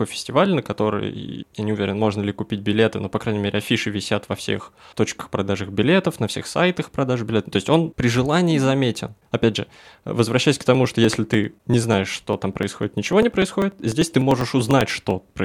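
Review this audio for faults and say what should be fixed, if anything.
From 10.75 s to 15.40 s, just after "же возвращаясь к", the speech carries periodic USB or driver dropouts: regular ticks every 99 ms, about fifty in all, where roughly a millisecond of audio is skipped each time. Prevent this by disabling the background task polling the USB bus or audio driver.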